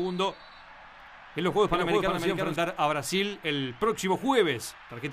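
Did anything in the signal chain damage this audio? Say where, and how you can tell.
Yes. A doubled audio track runs from the start to 2.56 s: a dry copy about 5 dB down trails by roughly 0.4 s, then stops abruptly, likely from a second, slower capture path.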